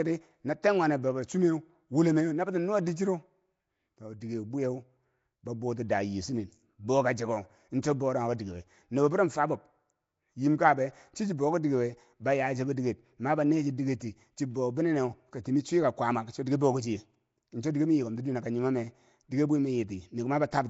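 Nellymoser compression runs through the whole recording, with the speech carrying a rough, hissy halo and a smeared, underwater quality from start to finish. The likely cause is the Flash-era Nellymoser Asao codec, which codes short blocks at a fixed two bits per sample and swaps quiet bands for synthetic noise. The damage is plainly audible, nothing survives above about 7.7 kHz, and the coarseness suggests a rate around 32 kbps.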